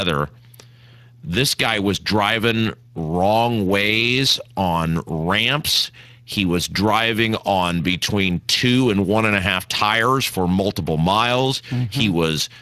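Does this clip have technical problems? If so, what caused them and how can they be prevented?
Yes. Throughout, the speech sounds hoarse and grainy, with nothing above 15.3 kHz. This is Speex codec damage: its CELP excitation is starved of bits, consistent with a bitrate of roughly 22 kbps. Prevent it by encoding at a higher Speex quality setting or switching to a modern codec such as Opus.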